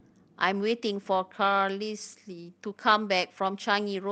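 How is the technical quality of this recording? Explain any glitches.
The recording has a timing problem from start to finish: the two ends of the link disagree about time, and the receiver keeps patching over the difference.

Clock drift between sender and receiver runs through the whole clip. The sender's audio clock runs roughly 5 percent faster than the receiver's, so audio arrives a little quicker than it can be played out. The jitter buffer steadily fills rather than holding level. It never runs dry here, but the receiver has to shed the surplus continuously, and the speech carries a faint, uneven unsteadiness in its timing rather than any single obvious break.

Repeated timing corrections are the receiver's response, and they span from 0.02 s to 4.10 s. To keep pace with a sender running at 105 percent speed, the receiver keeps trimming short slices of audio, always cutting, never repeating, at irregular spacing. 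Each edit is small, so none stands out as a dropout.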